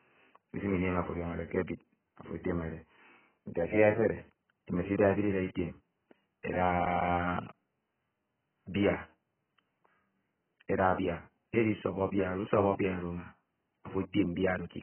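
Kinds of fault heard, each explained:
AAC compression: The speech has nothing above 3.1 kHz and sounds dull and smeared throughout. The likely cause is heavy AAC-LC coding, which fits a bitrate near 9 kbps. Starved of bits, the coder drops the top band and quantises the rest coarsely.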